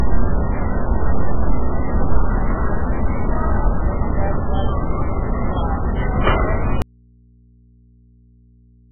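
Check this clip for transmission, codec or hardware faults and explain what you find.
Two faults are audible: heavy codec damage across the whole clip, and a dropout that runs from 6.82 s to the end.

MP3 compression, throughout: nothing is present above 3.5 kHz, and the remaining band sounds watery and swirly, with smeared attacks. This is likely MP3 encoding starved of bits, consistent with a very low bitrate of around 8 kbps. The encoder has cut the treble at a fixed frequency and is zeroing weak spectral lines, which flicker on and off between frames.

Audio dropout to a faint residue, from 6.82 s to the end: the signal cuts off abruptly rather than fading, and only mains hum remains, some 35 dB below the earlier level. The likely cause is a loss of the incoming signal while the downstream path stayed live, so the open input exposes its own hum for the final two seconds.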